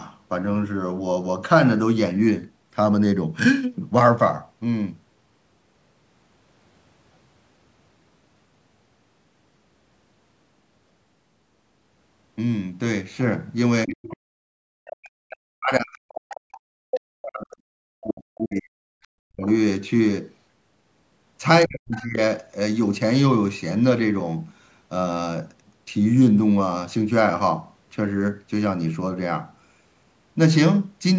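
From 13.85 s the echo canceller likely fails to separate the talker from loudspeaker echo during double talk, and ducks both. This speech suppressed in double talk pulls the voice down by roughly 40 dB at 13.85 to 14.01 s, 14.46 to 17.53 s, 17.97 to 19.46 s and 21.65 to 22.18 s, where it dips or drops out in pieces. Residual echo also likely escapes cancellation, so the other side's voice leaks through as scraps at 14.03 to 14.17 s, 16.3 s, 16.92 to 17.0 s and 21.91 to 22.05 s. Most are well below the talker, and the one near 16.9 s is nearly as loud.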